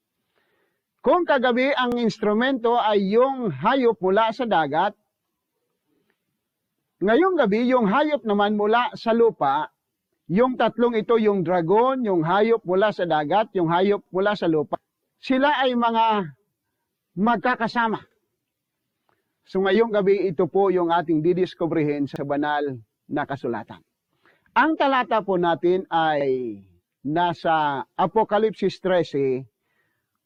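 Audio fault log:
1.92, 5.97, 10.02, 14.06, 18.11, 22.16 and 26.21 s: overlapping chunks. At each join the new 4 s chunk begins about 48 ms before the previous one ended, so that slice plays twice. The result is a brief stutter or click every 4 seconds. On a waveform, a short run of cycles repeats exactly at each join, often with a small discontinuity. On a spectrogram, a thin vertical seam appears at the same spacing each time.
14.75 s: skip ahead. Playback jumps forward with no gap and no fill. Roughly 0.7 s of audio is lost as the buffer drops queued material to cut its delay. The two sides butt together almost directly, so the sound lurches abruptly rather than pausing. The waveform shows a sudden change in envelope at a single point, with no silence. On the spectrogram, harmonic or formant tracks break off and restart at a different place.
15.32 to 15.93 s: jitter buffer speed-up. Over about 0.6 s the receiver trims short pitch-period pieces, roughly 50 ms in total, to run about 7% fast. 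Pitch stays the same, but the sound briefly feels hurried. On a spectrogram, the harmonic lines keep their height while events crowd closer in time. In the waveform, periodic cycles are missing at intervals, with no visible gaps.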